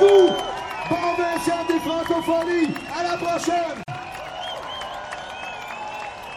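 Right from the start there's plainly audible MP3 compression damage, most likely from a low bitrate around 64 kbps. With so few bits, the encoder chops off the treble and drops quieter detail frame by frame, so everything sounds watery and swirly, with smeared attacks.

At 3.83 s there's a gap at a join of encoded pieces. A silence of about 46 ms opens until 3.88 s, left by encoder delay and end padding that weren't trimmed when separately encoded chunks were stitched together. The sound then picks up right where it stopped.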